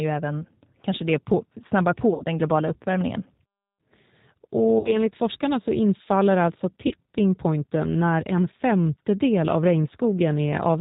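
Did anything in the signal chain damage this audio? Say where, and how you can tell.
Yes. G.729 codec damage runs through the whole clip at the codec stage. Nothing above 4 kHz survives, and the speech is plainly rough and synthetic. That fits G.729A at 8 kbit/s, which rebuilds speech from a vocal tract filter, a pitch predictor and sparse pulses.

VoIP packet loss concealed by the speech codec, a network fault, appears at 2.14 to 2.24 s, 4.79 to 4.97 s and 6.87 to 6.94 s. Each time the speech smears into a fading buzz or coloured noise, as the decoder stretches its last pitch and filter across gaps of 60, 60 and 40 ms. That suggests two or three lost packets each time.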